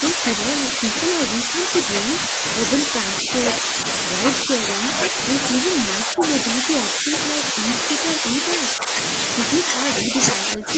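Speech repeatedly dips in level from 0.0 to 2.43 s, 2.86 to 3.77 s, 4.45 to 5.17 s, 5.61 to 8.95 s and 9.63 s to the end. Early drops are about 5 dB and later ones about 10 dB, likely speech suppressed in double talk as the echo canceller ducks the talker.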